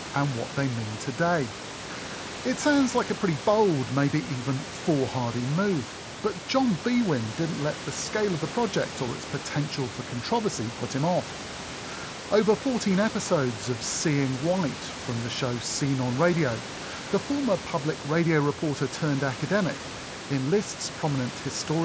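No technical faults are audible in this speech: the band stops at 8 kHz as expected for a call path carried over a Bluetooth mSBC headset link, the room noise sits about 15 dB below the speech, and the light grainy texture on louder sounds is within what that wideband headset codec normally produces.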